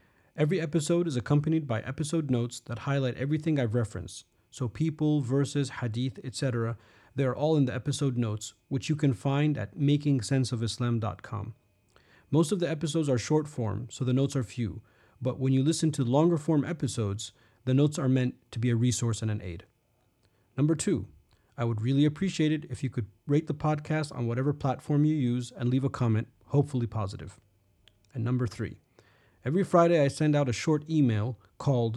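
No technical faults can be heard anywhere in the speech recording. Nothing in it calls for a timestamp or a closer listen.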